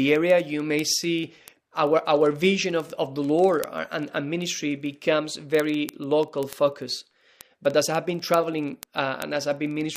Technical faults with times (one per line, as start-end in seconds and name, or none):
0.11-9.96 word clock ticks